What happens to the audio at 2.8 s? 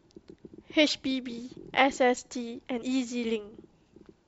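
At 2.81 s there's a brief glitch as the speech jumps ahead by roughly 50 ms: compressed frames skipped, a couple of 23.2 ms frames dropped.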